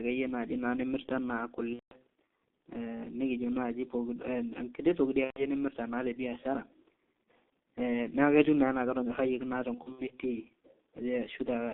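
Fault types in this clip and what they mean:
G.723.1 codec: The whole recording has passed through a very low-rate telephony codec that models the voice in 30 ms frames, and the heavy damage fits its 6.3 kbit/s mode. Its vocal-tract model updates only once per frame, so consonants smear into the vowels around them and the voice sounds hoarse and muffled. Only about 250 Hz to 3.6 kHz survives, which leaves the speech thin and boxy.
VoIP packet loss concealment by the speech codec: Packets went missing three times, and the decoder filled each gap by repeating its last pitch and filter settings at a falling level. From 1.73 to 1.93 s, about 180 ms is filled in. Just after "toki di", from 5.25 to 5.49 s, about 120 ms is filled in the same way. After "ketiu nenaa ketonyorrayieki naa", from 9.75 to 10.13 s, short dropouts of up to 60 ms are spread across roughly 360 ms.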